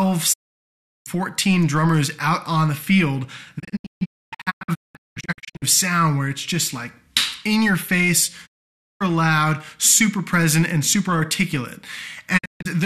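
A digital broadcast dropout recurs: the receiver lost good frames and muted, fading out over about 20 ms each time. Sound vanishes from 0.32 to 1.08 s, breaks into short holes totalling about 1.4 s between 3.58 and 5.64 s (longest 264 ms), cuts out again from 8.45 to 9.02 s, and drops in brief gaps between 12.37 and 12.67 s.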